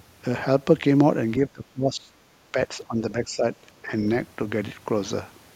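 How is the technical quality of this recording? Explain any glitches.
Two dropouts mar the speech, from speech suppressed in double talk. From 1.49 to 2.12 s the level sinks by roughly 20 dB. From 2.52 to 3.45 s it dips less, about 10 dB. Likely cause: an echo canceller ducking the near talker while the far side spoke.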